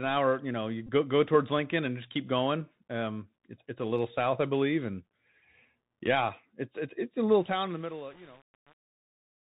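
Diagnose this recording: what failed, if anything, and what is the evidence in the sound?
The Bluetooth CVSD headset codec, at the codec stage, leaves plainly audible damage throughout: nothing above 4 kHz, scratchy s sounds and granular hiss, as a one-bit adaptive-step stream produces.

A Bluetooth headset packet repeated on the radio link from 0.87 to 0.90 s. About 18.8 ms of lost packets were re-decoded, giving a brief buzz near 267 Hz.

Truncation distortion on a fade sits in the volume or fade stage from 7.32 s to the end. Too few bits without dither, which points to about 7 bits, turn the fading speech gritty and stepped.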